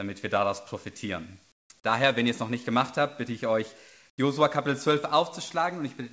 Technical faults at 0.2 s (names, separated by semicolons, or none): none